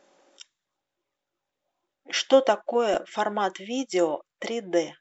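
Right around 2.94 s there's a quick blip, a short glitch lasting only about 8 ms. That's damaged data in the compressed stream: some bytes in that stretch of the encoded speech got lost or overwritten, so the decoder misread the frame there, lost its sync, and had to go hunting for the next valid frame header. The garbled decode in between is that brief glitch you hear.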